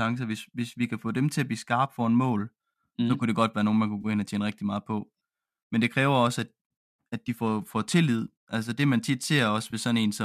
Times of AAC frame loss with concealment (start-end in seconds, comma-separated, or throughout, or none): 4.01-4.06, 7.26, 9.71-9.74